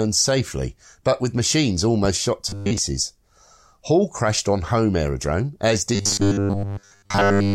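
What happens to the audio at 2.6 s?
From 2.49 to 2.79 s the speech turns into a rigid, metallic 100 Hz buzz. This is robotic sound from repeated short buffers, likely from a 10 ms chunk replayed for most of that span while real audio is skipped. A spectrogram shows flat harmonics every 100 Hz, and the waveform repeats identical cycles.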